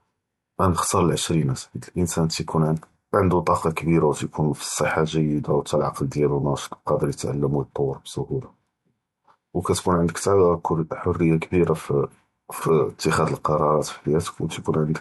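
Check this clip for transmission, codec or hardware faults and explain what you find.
One codec fault runs through the whole speech clip: low-bitrate audio saved at a high bitrate. From start to end nothing is present above about 11.9 kHz, and the speech carries the artefacts of an earlier MP3 coding. That points to an earlier pass at around 64 kbit/s. The likely cause is that this low-bitrate MP3 was re-encoded at a much higher rate, such as 256 kbit/s. The second encode enlarges the file but cannot restore the discarded band or detail.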